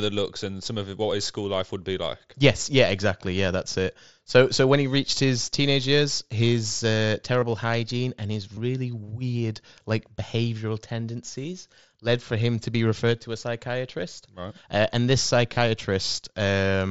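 Voice packets between the headset and phone dropped out, and the receiver filled each gap with the closest-matching stretch of recent waveform. This concealed Bluetooth headset packet loss produces brief buzzy, held-tone patches at 7.40–7.42 s, 8.55–8.57 s and 15.54–15.57 s, about 22.5 ms each. The mSBC wideband audio around them carries a light grain.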